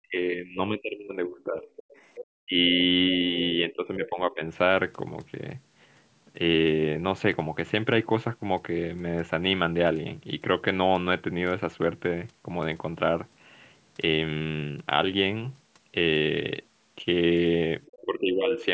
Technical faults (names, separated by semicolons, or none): speech suppressed in double talk; other side's voice leaking through; background gated by the echo canceller